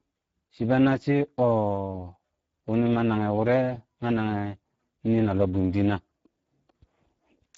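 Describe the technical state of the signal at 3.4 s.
At 3.4 s the speech carries Speex codec damage, present across the whole clip rather than at that moment alone. The coder has too few bits for its excitation signal, which points to a low setting near 10 kbps, so the speech sounds plainly noisy and hoarse. On a spectrogram, harmonics look smeared and grainy, the band above 4 kHz shows only diffuse, noise-like texture, and nothing appears above 7.6 kHz, leaving a flat ceiling.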